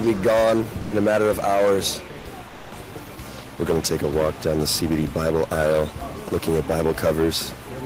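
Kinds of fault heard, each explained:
Sound dropped by the voice detector: Around 0.81 s, a short stretch of sound gives way to steady noise for about 100 ms, and roughly 70 ms of real sound is lost. The likely cause is a detector mistaking it for background and pausing transmission, as Opus DTX does.
Comfort noise in place of the background: From 2.47 to 2.71 s, about 240 ms of the real background, sitting about 20 dB below the loud parts, becomes a flat, featureless hiss about 3 dB quieter. This likely points to discontinuous transmission with synthetic fill noise.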